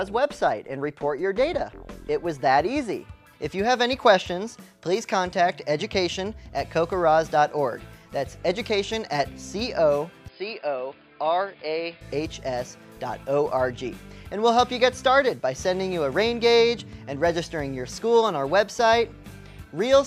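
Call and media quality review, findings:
Input switched to a poorer device, likely a capture-path change to a narrower-band microphone or headset profile, 10.28–12.01 s. Nothing above 5 kHz during the segment; sound turns dull and boxy, drops a few dB, and carries a faint new noise floor well under the signal. No gap at either switch. Full bandwidth returns abruptly at 12.01 s.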